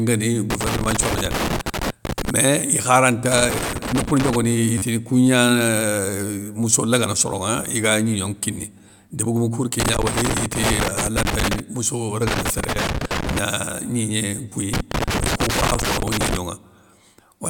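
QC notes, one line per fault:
0.50–2.30 s, 3.32–4.36 s, 9.80–11.60 s, 12.27–13.39 s and 14.73–16.37 s: loose connector crackle. Each stretch is an irregular burst of crackle and scratching over the speech. A worn or dirty contact in the signal path keeps making and breaking as it shifts, chopping the audio into fragments, and any DC on the line turns each break into a pop.
4.78–4.82 s, 10.90 s and 14.50–14.52 s: repeated buffer. Fresh audio failed to arrive in time, so the playback device replayed its last block of about 10.7 ms, which fits a 512-sample buffer. That block plays four extra times at 4.78 s, once at 10.90 s and twice at 14.50 s, with a hard join at each repeat. Because the block is so short, each event is heard as a click or brief buzz rather than a stutter. Roughly 40 ms, 10 ms and 20 ms of real audio are lost.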